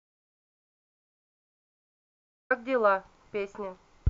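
Audio dropout to silence runs from the very start to 2.50 s: the clip opens in silence, with no room tone at all, and the speech begins abruptly. The input was likely lost while the recorder kept writing silence, so anything said then is gone.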